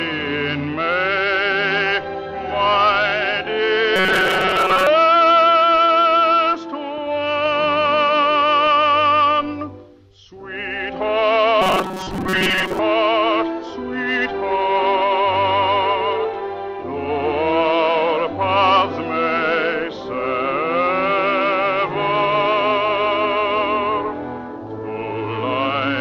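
From 3.96 to 4.87 s, the sound turns into a rigid, metallic buzz with a fixed pitch near 188 Hz. This is robotic sound from repeated short buffers. New audio is likely arriving too seldom, so a piece of about 5.3 ms keeps being replayed in place of fresh material. Most of the real audio in that stretch is skipped. The same buzz at 188 Hz returns from 11.62 to 12.79 s.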